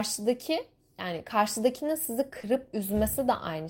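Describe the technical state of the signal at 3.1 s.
At 3.1 s the speech signal is intact, with no audible fault at that point.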